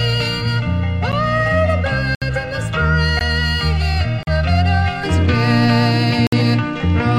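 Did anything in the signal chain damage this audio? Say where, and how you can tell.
Yes. Channel delay (comb filtering) runs from the start to about 5.0 s: the sound is hollow and phasey, with fixed notches, the first around 300 Hz. One channel lags by roughly 1.5 ms before mono summing, so shared content cancels at evenly spaced frequencies.

Gaps between stream segments occur at 1.12 s, 2.15–2.22 s, 3.19 s, 4.23–4.27 s and 6.27–6.33 s: hard-edged silences of 10 to 67 ms, about once per second. This points to network streaming with 1-second segments whose timestamps leave holes that the player fills with silence.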